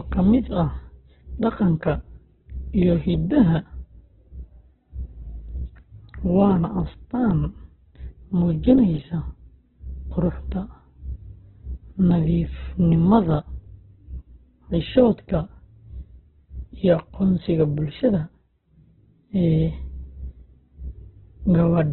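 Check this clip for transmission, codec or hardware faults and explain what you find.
One codec fault runs the whole length. Throughout, the speech sounds narrow, grainy and rough, with nothing above 4.3 kHz. That points to Opus compression, likely squeezed to a bitrate near 8 kbps.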